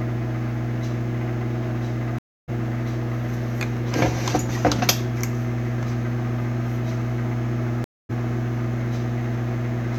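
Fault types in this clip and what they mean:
Stream reconnect: the link dropped, the player went quiet, then restarted decoding mid-stream. It happens twice, a 0.29 s gap at 2.18 s and a 0.25 s gap at 7.84 s, and each time the sound resumes a bit further on, roughly 0.3 s and 0.2 s later.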